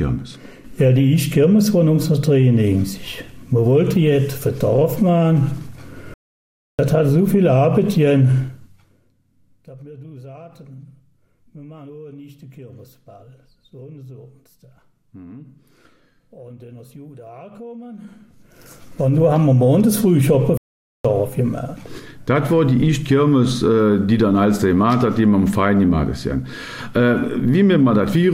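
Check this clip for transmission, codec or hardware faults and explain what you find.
Two faults turn up here: a couple of playback stalls and some zipper noise on level moves.

The playback stalls hit at 6.14 to 6.79 s, about 650 ms of silence, and again at 20.57 to 21.05 s, about 470 ms. The sound just drops out mid-flow and then carries on, which is most likely the player starving for data or its thread getting blocked.

The zipper noise shows up from 8.4 to 9.12 s as the level drops by roughly 25 dB, and from 17.92 to 19.24 s as it comes back up by about the same. The gain moves in 1 dB jumps, around 30 a second, with no smoothing, so each jump clicks and you get a ticky zipping on top.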